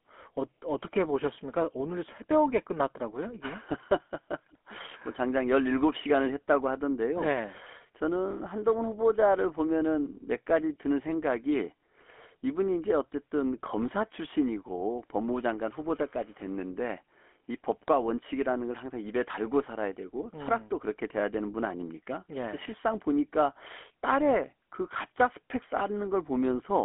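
Throughout, the speech carries GSM full-rate codec damage. Its pulse-driven excitation, fitting 13 kbps, leaves a buzzy, gravelly roughness, with the band confined to 250 Hz–3.4 kHz and nothing above 3.8 kHz.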